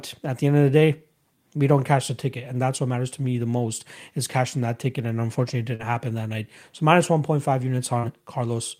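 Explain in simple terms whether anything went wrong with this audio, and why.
Two brief smears break the speech, at about 5.75 to 5.82 seconds and 7.99 to 8.06 seconds. This is short concealed packet loss: roughly 40 milliseconds of the call arrived too late each time, so the receiver papered over the gap by extending the preceding sound.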